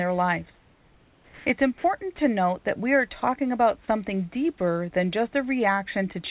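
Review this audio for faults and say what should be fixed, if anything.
From 0.54 to 1.46 s, about 920 ms of the room background is replaced by comfort noise. The real background, sitting roughly 34 dB under the loudest speech, turns into a flat, smooth hiss about 3 dB quieter, and the texture comes back when speech resumes. This is likely discontinuous transmission: the sender stops sending during the pause, and the receiver fills the gap with synthetic noise that only roughly matches the room.

There are also four short gaps where the voice detector drops sound. The longest is 1.78 to 1.84 s, about 60 ms. The others are 2.16 to 2.18 s, 3.20 to 3.22 s and 4.58 to 4.60 s, each about 20 ms, and the last loses only about 10 ms of actual sound. The likely cause is the detector mistaking soft speech edges for background and cutting them, leaving brief patches of steady noise inside the speech. 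All of this happens over a narrowband path with nothing above 4 kHz, which fits G.711.

To prevent both problems, turn off DTX or lower the sender's VAD aggressiveness and add hangover time, so quiet speech and pauses keep sending real audio.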